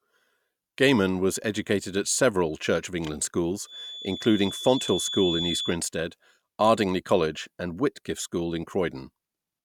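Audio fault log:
3.63–5.79 s, feedback whistle: a thin, steady tone at 3.5 kHz sits behind the speech, roughly 10 dB under it and swelling and fading slowly in level. Likely a speaker-to-mic loop hovering right at the edge of feedback, ringing on one frequency without running away.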